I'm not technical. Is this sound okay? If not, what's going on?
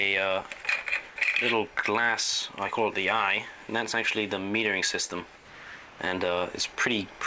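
No. From 5.36 to 5.99 seconds, a bit over half a second, the natural background drops out. A smooth, even hiss takes its place, a little quieter and without any of the real room's detail. This is likely comfort noise in place of the background. The call system stopped sending sound during a pause it judged silent, and the receiving end filled the gap with made-up noise until the sound returned.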